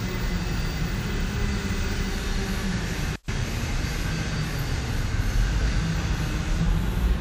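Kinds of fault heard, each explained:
Playback stall: at 3.16 to 3.28 s the sound drops abruptly to silence for about 125 ms, then returns. The likely cause is the player running out of buffered data or its output thread being blocked, leaving nothing to play until it recovered.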